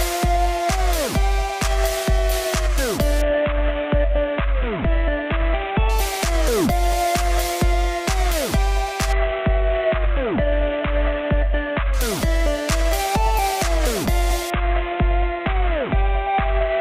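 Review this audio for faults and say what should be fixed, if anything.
Three Bluetooth SBC bit pool drops occur, from 3.22 to 5.89 s, from 9.13 to 11.94 s, and from 14.50 s to the end of the clip. In each, the treble goes dull and a gritty noise rises. In the first two it clears when the rate recovers, but the last runs to the end. This points to the link's encoder falling from a bit pool of about 28 to about 5, near 54 kbps. The upper sub-bands get almost no bits, and the remaining bands are coarsely quantised. To prevent it, reduce 2.4 GHz congestion and distance between devices, or use a wired path.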